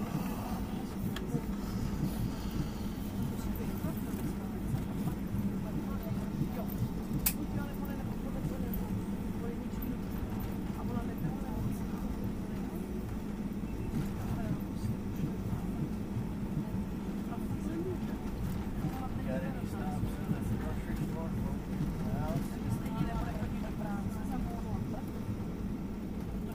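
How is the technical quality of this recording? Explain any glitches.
No glitches or faults are audible.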